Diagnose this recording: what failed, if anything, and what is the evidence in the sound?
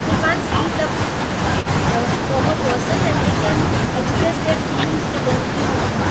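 Nothing failed here: the speech sounds like an ordinary call, passing through the microphone processing and an Opus call path with nothing in it above about 8 kHz, and nothing in the sound points to a problem.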